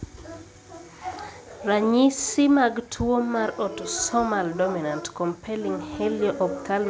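Nothing stood out on listening to this speech; the sound of the call path, with nothing above 8 kHz, is as expected for the G.722 codec at 64 kbps.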